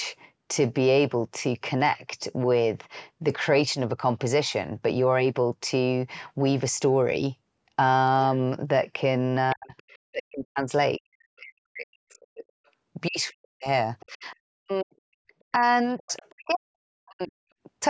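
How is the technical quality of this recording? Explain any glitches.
The speech has clear echo-canceller problems in its second half, through the call's microphone processing, which carries nothing above 8 kHz.

Other side's voice leaking through: faint second voice at 9.50–9.81, 12.66–12.70, 13.29–13.33, 14.00–14.35 and 16.08–16.55 s. It sits about 20 to 40 dB below the talker. Likely incomplete echo cancellation of a loudspeaker.

Speech suppressed in double talk: from 9.54 to 17.34 s the talker dips repeatedly, by up to about 40 dB, totalling around five seconds. The canceller likely ducked both voices during overlap.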